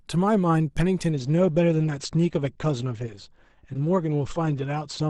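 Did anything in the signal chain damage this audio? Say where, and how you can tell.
Yes: at the network and codec stage, an adaptive stream at a lower bitrate switched in at 1.10 s without a gap, fitting a drop from 64 to 16 kbit/s Opus. Codec artefacts in the speech rise until the end.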